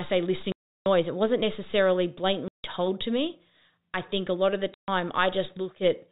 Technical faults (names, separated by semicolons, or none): packet loss filled with silence